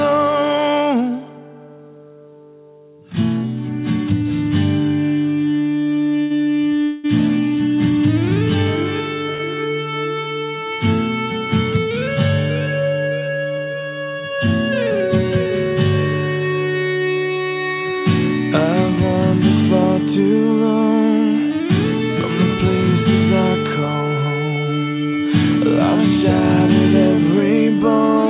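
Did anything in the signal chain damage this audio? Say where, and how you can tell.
Yes, the damage is on the network side, at the receiver's jitter buffer. Two short stalls from a late packet show up at 6.22 to 6.38 s and 9.34 to 9.42 s. In each, a packet missed its slot and the buffer ran dry, so the last sound gets held for roughly 80 ms and 50 ms with a faint buzz or dip. Then it picks up from the same spot, so nothing is lost.

There's also a call audio freeze from 6.84 to 7.06 s, likely caused by packets being held up in transit and emptying the buffer. The receiver stretches the last sound into a fading buzz or hiss for about 200 ms, never dropping to silence. It then resumes where it stopped, so a gap is inserted and nothing is missing. The narrowband top end, with nothing above 4 kHz, is just the call codec path.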